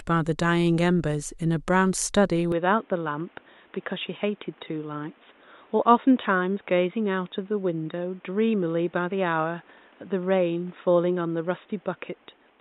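At 2.52 s the speech turns dull and quieter, capped near 3.8 kHz with a new noise floor, likely an input switched to a poorer device.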